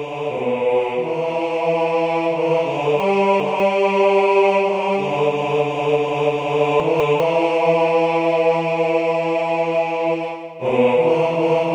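Two brief jumbled moments interrupt the audio, at 3.0 to 3.6 s and 6.8 to 7.2 s. These are chunks out of order. A 200 ms chunk plays two chunks late in the first spot and one late in the second, leaving hard joins.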